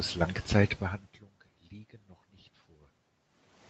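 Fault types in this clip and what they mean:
No faults found; the level changes near half a second and three seconds are the talker moving relative to the microphone, and the top end stopping at about 8 kHz is normal for the call path.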